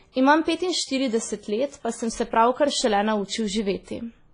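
Right through the speech there's heavy transform-codec damage, likely WMA compression at a low bitrate, which fits something around 24 kbps. Long coding blocks smear the quantisation noise, so the sound rings and washes, a hiss breathes with the level, and nothing survives above 10.4 kHz.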